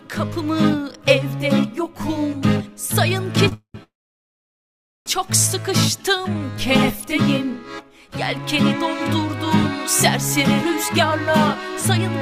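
At 3.48 to 3.53 s there is a short stall from a late packet. A packet missed its playout slot and the jitter buffer ran dry, so the receiver held the last bit of sound for about 32 ms until the data turned up, then resumed from the same point. Nothing is lost, but the sound is briefly sustained with a faint buzzy smear, and total delay grows by those 32 ms.

A call audio freeze follows immediately, from 3.54 to 3.75 s. The buffer likely emptied again as packets were held up in transit. The receiver extended the last sound as a fading buzz for about 207 ms, the final 90 ms of it silent, before the audio picks up where it left off. A second, longer freeze runs from 3.83 to 5.07 s, with the same likely cause. Here about 1.2 s of gap is inserted, and after a brief decaying tail nearly all of it, about 1.16 s, is silence. In both freezes no audio is dropped, so the pause simply pushes everything later.

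From 5.96 to 6.52 s there is a jitter buffer slow-down. The receiver rebuilt its reserve by repeating single pitch periods and short stretches of pause, adding 76 ms. Playback runs at about 88% speed at unchanged pitch, so sounds come out drawn out.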